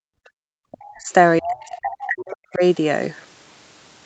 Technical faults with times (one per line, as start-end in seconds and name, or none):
0.00-0.31 background gated by the echo canceller
0.59-1.09 speech suppressed in double talk
1.39-2.63 speech suppressed in double talk
1.61-1.66 other side's voice leaking through